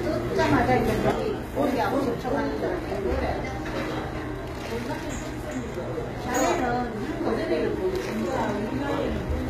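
From the start, the treble has a gritty, metallic sheen. Sharp, hissy detail sounds lispy rather than crisp, and nothing reaches above about 14.9 kHz. This is likely HE-AAC compression at a low rate, consistent with around 20 kbps. Only the lower spectrum is properly coded. The upper bands are rebuilt by copying lower content upward, so the top end sounds synthetic, with harmonics that don't line up.

At 1.11 s the sound suddenly drops by about 6 dB and stays lower through to the end. This is one channel dropping out, likely a lost stereo channel. With only one side feeding the mono sum, material common to both channels is left at half its former amplitude.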